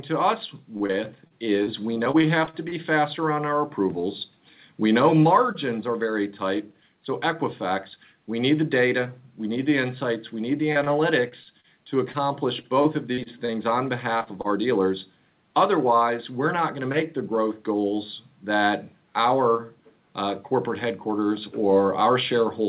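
From 0.77 to 2.75 s there's repeated packet loss (robotic sound). About ten short holes, none longer than 36 ms, each get patched by stretching the previous bit of sound. That gives a choppy stutter. It happens again from 10.72 to 14.47 s, with about fourteen holes up to 34 ms.

Between 6.83 and 8.14 s a jitter buffer speed-up kicks in. The receiver trims tiny pitch-period slices, roughly 70 ms in all, to cut a backlog, so the audio runs about 4% fast at unchanged pitch. A second one, around 3% fast, runs from 13.44 to 14.88 s, overlapping the end of that later loss stretch.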